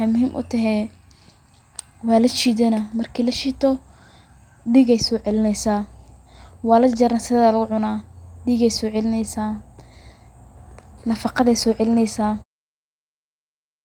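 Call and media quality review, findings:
Nothing stood out on listening to this speech recording, and the gentle fade-out at the end, from about 12.5 s, sounds like an ordinary edit.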